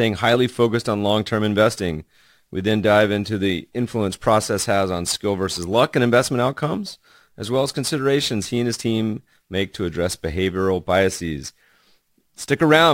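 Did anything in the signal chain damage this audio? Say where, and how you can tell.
Yes. The damage is at the sample-format conversion stage: a crude rate conversion from 48 kHz to 44.1 kHz that simply picks the nearest sample, with no interpolation filter. Throughout the speech, a gritty, inharmonic fizz rides on the louder and brighter sounds, around 25 dB below them. The skipped samples repeat in a fixed pattern set by the two rates, so a spectrogram shows faint spurious tones and mirrored smears unrelated to the speech harmonics, and the waveform shows tiny periodic steps.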